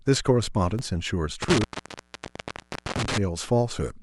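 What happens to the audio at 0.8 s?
A brief skip at 0.79 s: about 20 ms of speech drops out and the edges butt together. This is likely audio missing between chunks at a 1-second chunk boundary.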